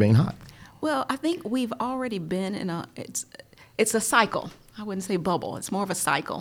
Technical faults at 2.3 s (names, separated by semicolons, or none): clock drift buffer slips